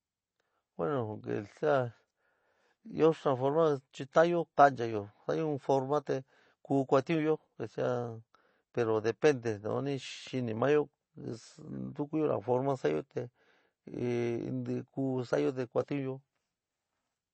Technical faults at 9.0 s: MP3 compression

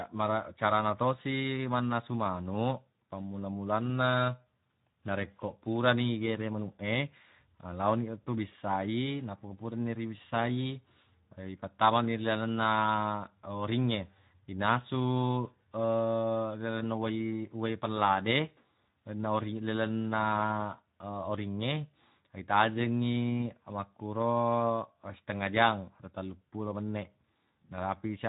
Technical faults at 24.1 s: Speex codec

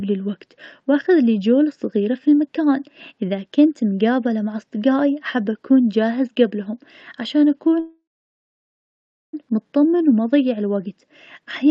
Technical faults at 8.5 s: call audio freeze

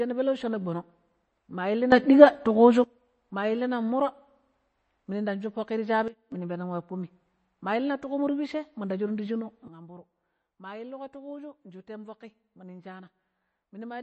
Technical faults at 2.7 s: MP3 compression; sudden gain jump

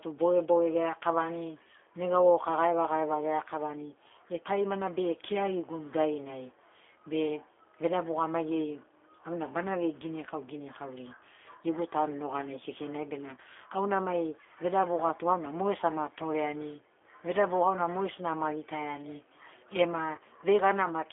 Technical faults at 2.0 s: G.729 codec

